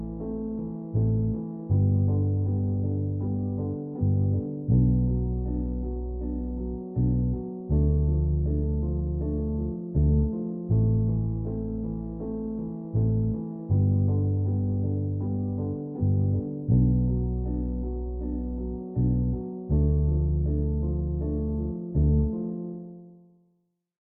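A recording of sounds with no technical faults anywhere in the signal.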